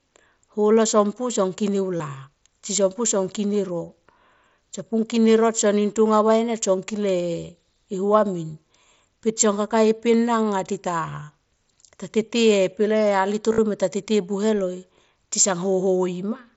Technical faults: concealed Bluetooth headset packet loss

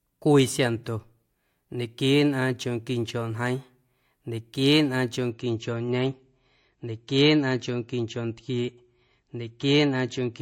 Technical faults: adaptive stream at a lower bitrate

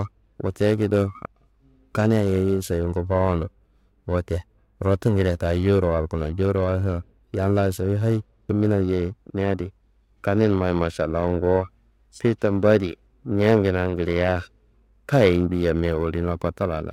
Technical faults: periodic clock jitter

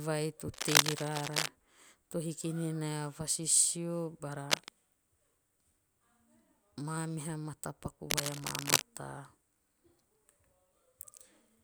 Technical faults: cable scratch noise

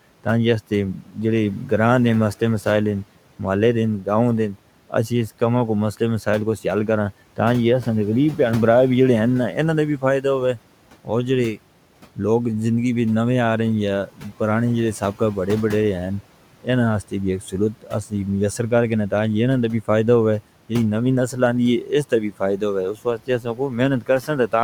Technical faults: speech cut by the noise suppressor

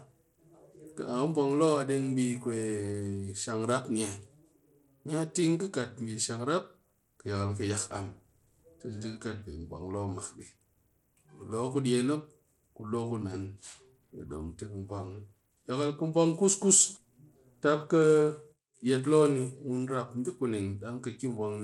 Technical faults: Bluetooth SBC compression

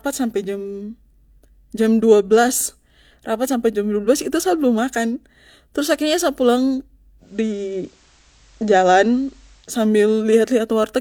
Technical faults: digital radio blending to analogue

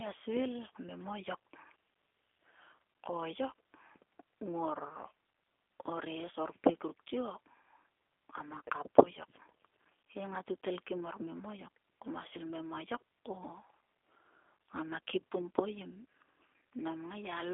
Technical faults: G.729 codec

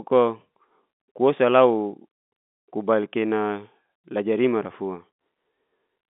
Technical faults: none

